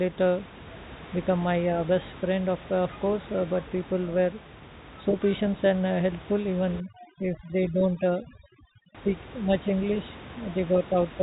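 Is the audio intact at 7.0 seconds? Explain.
No. From 6.80 to 8.95 s, just after "patient and uh helpful", the room background collapses into near silence flecked with twinkling specks. This is overdone noise removal. A noise reducer set far too aggressively is switching off individual frequency bands whenever they sit close to its noise estimate, and the room noise, only about 17 dB below the speech, puts the softer parts of the voice in that range, so they are cut along with it.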